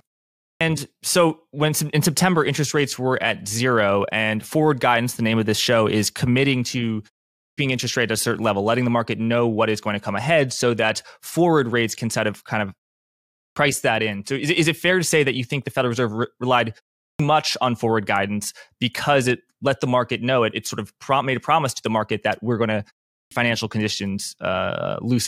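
The speech loses its opening after each pause, a clipped start after a pause, at 0.43 s before "so when in", at 7.4 s between "show is committing to" and "interest rate at a", and at 13.4, 17.02 and 23.14 s, the last after "that we're going to". Each time roughly 165 to 177 ms vanishes as the output wakes from sleep following pauses of 0.3 to 0.69 s. Speech jumps in abruptly, first sounds missing; a waveform shows flat silence ending in a hard-edged burst, and a spectrogram shows energy starting with a vertical cut rather than a rising onset.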